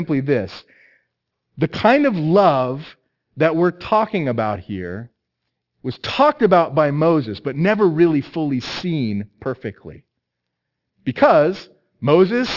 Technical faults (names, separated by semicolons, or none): aliasing